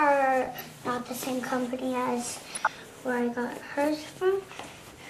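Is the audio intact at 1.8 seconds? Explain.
No. At 1.8 s, as through the whole clip, there is plainly audible damage that is likely MP2 compression at a starved bitrate near 80 kbps. Upper sub-bands switch off and flicker back while the remaining bands are coarsely quantised, giving a dull, gurgling graininess rather than a steady low-pass roll-off.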